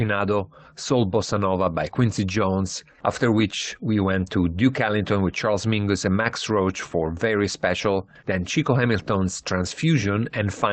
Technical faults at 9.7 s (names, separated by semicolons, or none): lost packet rebuilt from error correction